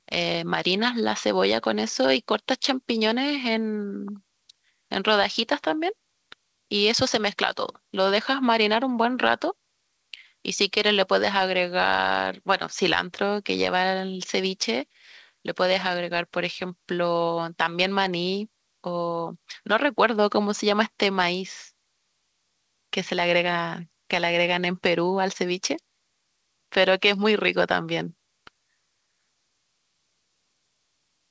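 No technical faults can be heard anywhere in this speech recording. It has clearly passed through a working call path, whose codec leaves nothing above 8 kHz, which fits a wideband codec such as G.722.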